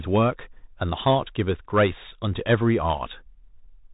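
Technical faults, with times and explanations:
Throughout, Bluetooth CVSD headset codec. Nothing above 3.8 kHz survives. One-bit up-down coding with an adapting step leaves granular hiss and scratchy s sounds.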